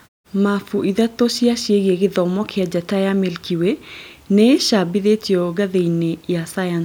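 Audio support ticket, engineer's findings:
Listened in full on the speech clip; nothing stood out as a fault.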